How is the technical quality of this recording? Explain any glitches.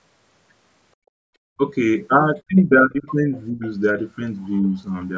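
The recording is speech from a call, and the echo canceller has left three kinds of glitch: background gating, speech suppression during double talk, and a brief leak of the other side's voice.

Background gated by the echo canceller, 0.98 to 1.28 s: while the loudspeaker was playing, the canceller clamped the microphone hard, cutting the room sound by about 34 dB for roughly 300 ms before releasing. The room sound drops out and then comes back. On a waveform the noise floor collapses to a near-flat line for that stretch. On a spectrogram a vertical band of blank space runs across all frequencies up to the 8 kHz ceiling of the call's microphone processing.

Speech suppressed in double talk, at 1.56 to 1.65 s, 2.48 to 3.07 s and 3.51 to 3.63 s: the talker's level dips in these spots. The dips are deep and short at first, around 25 dB over a tenth of a second, then shallower but longer, about 15 dB across roughly 400 ms, then about 20 dB for a tenth of a second. 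The likely cause is both sides talking at once, with the canceller unable to separate the near voice from the echo and turning everything down. On the waveform the envelope pinches in. On the spectrogram the harmonics fade.

Other side's voice leaking through, 3.35 to 3.42 s: a faint scrap of a second voice sits about 30 dB below the talker for some 70 ms. It is most likely loudspeaker echo that the canceller failed to remove. On a spectrogram it shows as weak, separate harmonic traces that don't line up with the main voice. On a waveform it barely registers.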